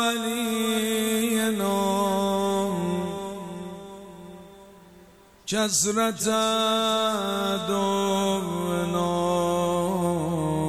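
No technical faults are audible anywhere in the recording.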